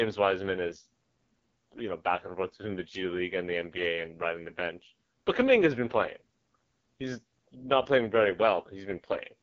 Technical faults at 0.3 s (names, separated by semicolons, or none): AMR wideband (HD Voice) codec